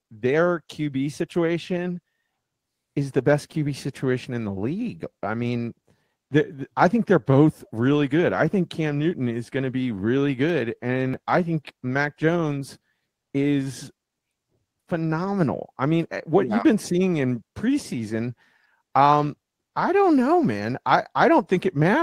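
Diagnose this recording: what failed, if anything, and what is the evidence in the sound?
At 1.65 to 1.67 s, one 20 ms stretch of speech turns briefly rougher and noisier without any gap, which points to a single network packet lost and rebuilt from error correction in the codec. The decoder played the low-bitrate copy carried by the next packet. Ordinary concealment without that copy would smear or fade instead.

At 10.50 s there is a single sharp click, a thin vertical line across the spectrum, with no audible hole in the speech. This is dropped samples, likely at the driver or buffer stage. A tiny fraction of a millisecond vanished, so the waveform jumps abruptly. A real dropout would leave silence.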